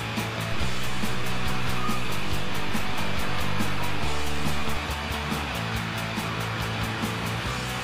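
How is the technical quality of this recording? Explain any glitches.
The quality suffers from one DC step. At 0.52 s the waveform's zero line jumps by about -23 dBFS, as when an input carrying an offset is switched in, and it drops back at 4.77 s. Each shift sounds as a low thump while the sound carries on unchanged.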